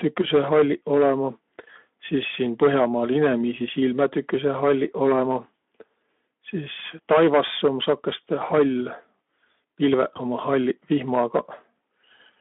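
Hard clipping runs through the whole speech clip. The signal is driven about 11 dB past what one stage can pass, so a small share of samples, around the loudest syllables, have their peaks sliced flat. The flattened tops add harsh high harmonics, heard as crackle on the peaks.

VoIP packet loss concealed by the speech codec occurs from 10.13 to 10.19 s. About 20 ms of audio, roughly one frame's worth, went missing, and the Speex decoder filled the gap by extending its last pitch and spectral shape at falling gain. The result is a brief buzzy, smeared patch, and the sound stays weak or distorted for a short time after the packets resume, inside the narrow 150 Hz to 3.5 kHz line band.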